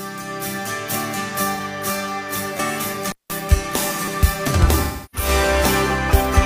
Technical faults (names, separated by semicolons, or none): AAC frame loss with concealment; repeated buffer; intermittent contact